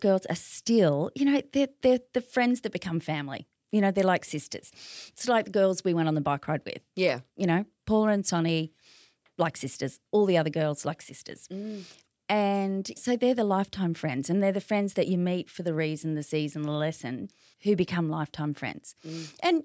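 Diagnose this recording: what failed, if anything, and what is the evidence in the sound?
Nothing failed in this speech recording, and the sound gives no evidence of any fault.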